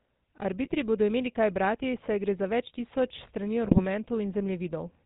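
The whole speech clip carries the GSM full-rate codec sound, a buzzy, gravelly roughness with nothing above 4 kHz, which fits the 13 kbps full-rate coder. GSM bit errors then hit from 0.64 to 0.75 s, just before "bodo imeli kaj brati", and from 3.64 to 3.85 s, right after "za več tisoč strani". Corrupted filter and gain values bend the spectrum into brief squawks and gargling.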